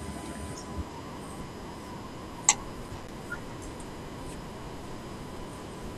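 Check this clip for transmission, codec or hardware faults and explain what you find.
There's one hardware fault in this speech clip: a burst of loose connector crackle from about 2.71 to 3.11 s, lasting roughly 0.4 s. It sounds like an irregular scratchy crackle laid over the audio. A worn or dirty contact somewhere in the cable or jack is making and breaking as it shifts, so the signal keeps getting chopped on and off. Any DC sitting on the line turns each of those breaks into a little pop on top of the scratchy texture.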